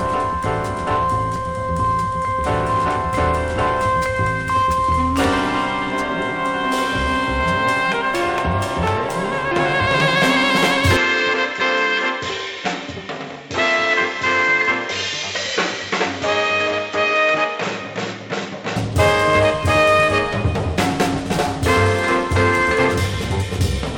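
From 10.97 to 18.76 s, audio turns dull and quieter, nothing above 7.6 kHz, faint new noise; likely an input switched to a poorer device.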